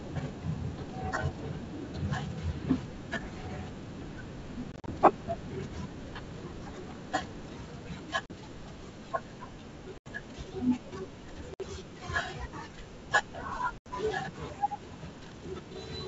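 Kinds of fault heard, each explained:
Packet loss on an ADPCM call: Lost packets are filled with silence, leaving hard-edged holes. The decoder's predictor and step size then disagree with the sender's, so speech resumes slightly distorted. Five bursts of loss occur between 4.72 and 13.78 s.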